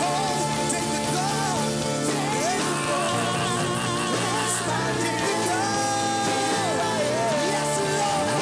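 Nothing in the audio stands out as a technical fault; it just runs along without a hitch anywhere in it.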